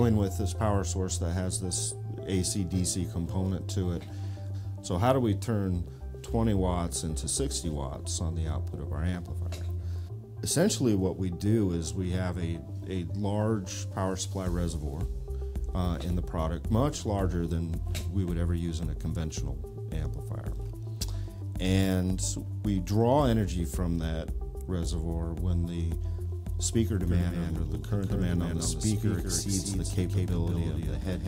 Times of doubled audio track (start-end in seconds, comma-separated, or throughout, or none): 27.07-31.28